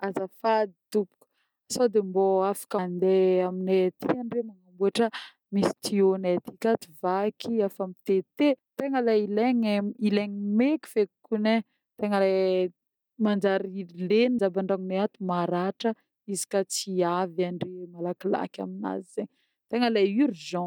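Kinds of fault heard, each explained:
Audio missing between chunks: the speech skips at 2.78, 8.58 and 14.38 s, roughly a fifth of a second lost each time, with the two sides joined directly and no silence between them. The evenly spaced skips likely come from audio being dropped between 6-second chunks.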